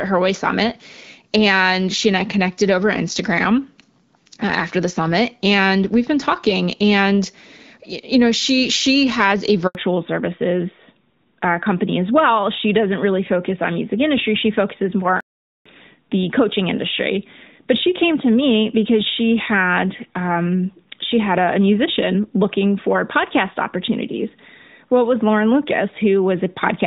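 This is a speech clip carried over a phone call. After "she she has a", a handover gap at 9.67 s silences the audio for 80 ms while the call switches networks. From 9.75 s onward there is a fallback to narrowband. Nothing above 4 kHz remains, so the voice turns duller and rougher than the earlier HD Voice section, whose sound fits AMR-WB at about 12.65 kbit/s. The narrowband part fits AMR-NB at about 12.2 kbit/s. At 15.21 s a playback stall cuts the sound for 450 ms before it resumes, likely because the player ran short of data or its thread was blocked.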